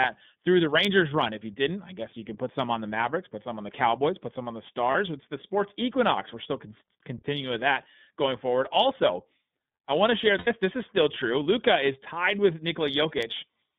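The clip is speech carried through the iLBC codec. Nothing above 3.6 kHz or below 150 Hz survives, so it sounds thin and boxy. The coding damage is plainly audible as a rough, slightly synthetic edge, which fits iLBC's 30 ms frame mode near 13.3 kbps. There are also two lost iLBC frames events. At 4.91 to 4.95 s, after "put some on the", a 30 ms gap becomes a brief buzzy held vowel. At 10.38 to 10.48 s, after "I want to share", a 90 ms gap is filled the same way, with the repeated pitch cycle fading. Each time the voice recovers almost instantly, because every frame is decoded independently.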